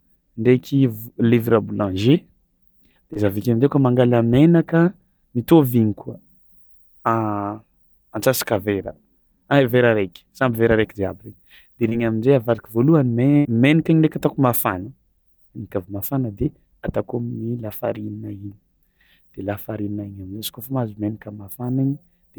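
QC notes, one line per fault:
3.13–3.17 s and 11.89–11.93 s, short concealed packet loss: about 20 ms of speech arrived too late each time. The receiver stretched the preceding sound to cover it, leaving a brief smear or wobble.
13.37–13.47 s, burst of packet loss: about 80 ms of consecutive audio never arrived. The decoder held and faded the last sound into a buzz or hiss, then resumed with that stretch missing.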